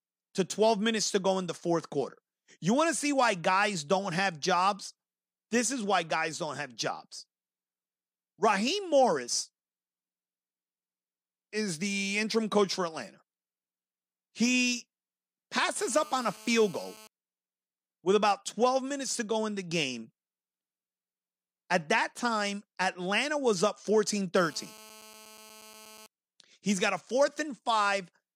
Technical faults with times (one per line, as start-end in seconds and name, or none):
15.76-17.07 GSM phone buzz
24.37-26.06 GSM phone buzz